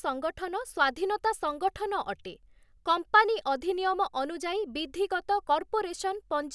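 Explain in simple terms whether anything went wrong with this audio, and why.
Nothing went wrong here; the speech comes through with no dropouts, clicks, distortion or glitches anywhere in the recording.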